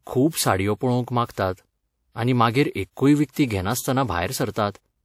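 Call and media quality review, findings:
Pre-echo, three events in speech. Short hiss smearing ahead of sharp onsets. 0.28–0.33 s, 48 ms, just before "साडयो पळोवंक". 1.32–1.37 s, 52 ms, after "साडयो पळोवंक". 3.31–3.36 s, 57 ms, after "आनी मागीर एक्कूय". Probable component: transform codec. Attacks land late in a block. Quantisation noise sized for the loud part spreads across the quiet lead-in. Onsets sound softened.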